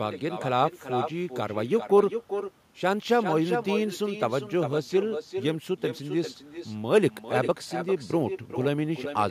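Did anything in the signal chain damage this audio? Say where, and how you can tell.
Yes. At the call-processing stage, the far end plays the call over a loudspeaker and its microphone picks it up, with no echo canceller to remove it. Throughout the speech, a thinner copy about 7 dB down trails each phrase by around 0.4 s.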